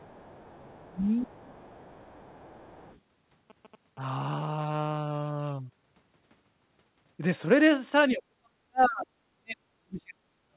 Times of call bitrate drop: none

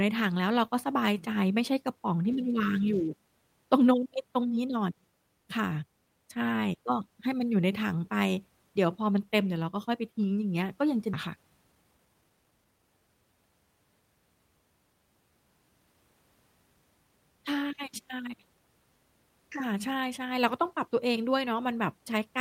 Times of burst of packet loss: none

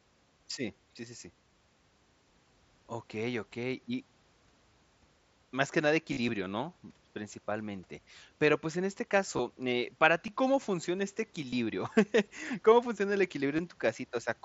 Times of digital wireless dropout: none

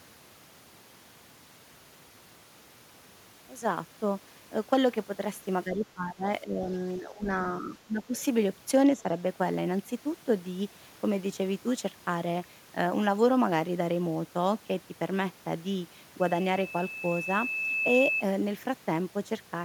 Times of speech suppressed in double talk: 5.65-6.69, 6.98-7.28, 7.60-8.18, 8.96-9.04

